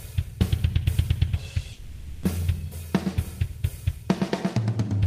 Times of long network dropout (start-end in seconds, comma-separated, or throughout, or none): 1.72-2.24